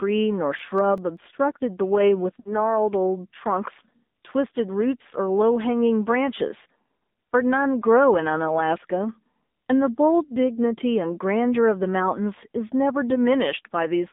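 All the way through, the speech carries the AMR narrowband mobile codec sound: everything sits in a 200 Hz to 3.7 kHz band, and the buzzy, synthetic edge points to a low bitrate, roughly the 7.4 kbps mode. The codec damage is plainly audible.

From 0.59 to 1.17 s there are four CD scratch ticks, tiny clicks only a few milliseconds long. They come from a damaged spot on the disc that the error correction couldn't patch, so the player filled in or muted those samples on each pass.

Then from 2.40 to 2.75 s you get lost AMR speech frames. The decoder hides about 60 ms of missing signal, which fits three dropped 20 ms frames, by stretching out the last good sound and turning it down. It smears and dips, then recovers a bit rough.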